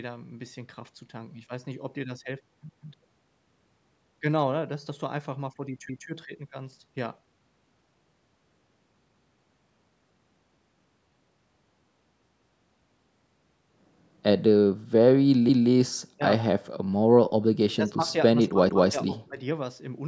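At 2.69, 5.89, 9.09, 12.29 and 15.49 s, overlapping chunks cause a stutter. The audio arrives in 3-second pieces. Each new piece starts 200 ms before the last one ended. So 200 ms repeats at every join, heard as a regular hiccup.

At 16.17 s the speech dips for about a tenth of a second, falling by roughly 15 dB. This is speech suppressed in double talk, likely. The echo canceller could not separate this talker from the far side, so it turned both down.

At 17.70 s a faint copy of the speech surfaces briefly. It trails the original by 238 ms and sits about 25 dB lower. This is likely echo leak. The far side's loudspeaker sound got past its echo canceller and was sent back.

From 17.81 to 18.10 s the speech sags mildly, by about 5 dB. From 18.34 to 19.39 s it drops again in pieces, up to about 15 dB, for around half a second in all. Both are the same double-talk suppression. At 18.69 s one more 200 ms chunk overlap repeats within that stretch.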